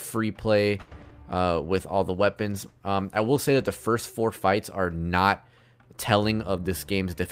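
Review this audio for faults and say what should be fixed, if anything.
Repeated packet loss (robotic sound) runs from 0.81 to 1.12 s. Packets went missing over and over, leaving four holes, the longest 100 ms. The receiver covered about 130 ms by extending the last good sound and could not cover another 60 ms, so roughly 42% of that stretch is patched. It comes out choppy and mechanical, with pieces dropped out. Stronger forward error correction or redundancy on a lossy link would prevent it.

A jitter buffer slow-down follows at 1.23 to 1.43 s. The buffer ran short, so the receiver stretched the audio by repeating small pitch-length pieces to rebuild its reserve. It added 42 ms, slowing this part to 83% speed without changing pitch, so the sound drags briefly. Keeping the buffer target stable after a loss burst, rather than refilling it this quickly, would prevent it.

A call bitrate drop spans 1.52 to 3.91 s. 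The bandwidth estimate fell, and the encoder went from 48 kbps down to 18 kbps, staying at the lowest rate for about 2.3 s. With far fewer bits, the codec describes the signal more coarsely, so the audio turns rough and less clear until the rate climbs back. Smoothing the bandwidth estimator so it does not overreact to a short loss burst would prevent it.

A jitter buffer speed-up covers 6.44 to 7.28 s. Too much audio had piled up in the buffer, so the receiver cut out short pitch-period pieces repeatedly, removing roughly a tenth of a second. This part plays at about 111% speed at the same pitch and sounds hurried. Draining excess delay more gradually, or during pauses, would prevent it.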